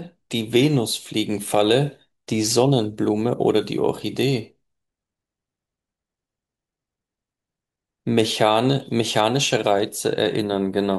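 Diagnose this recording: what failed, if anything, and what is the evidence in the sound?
Nothing failed in this recording, and the sound gives no evidence of any fault at any stage.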